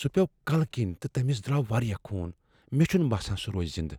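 Drift correction step in speech, 1.93 to 2.62 s, after "تہٕ تٔمس دراو": speed jumps about 5.8% and pitch nearly a semitone (97 cents), then snaps back, likely a clock-matching rate change.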